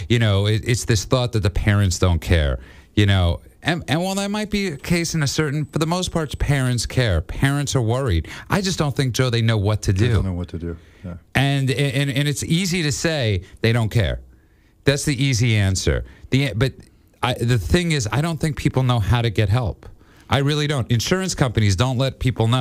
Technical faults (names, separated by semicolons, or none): USB whine